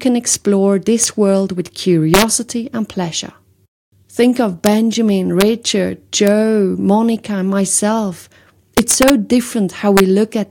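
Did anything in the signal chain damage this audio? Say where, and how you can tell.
Yes. Integer overflow cracks occur at 0.34, 1.04, 2.14–2.22, 4.66, 5.41, 6.27, 8.78–9.10 and 9.97–10.0 s, including before "world with" and after "and myself". A gain or sample-format stage pushed peaks about 0–3 dB past full scale, and those samples wrapped to the opposite sign instead of limiting.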